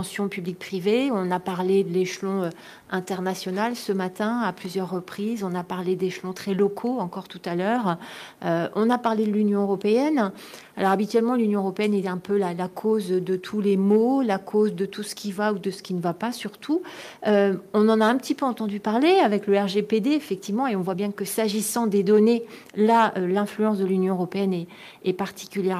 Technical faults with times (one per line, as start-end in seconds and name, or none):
0.00-25.79 clock drift between sender and receiver
0.19-25.74 repeated timing corrections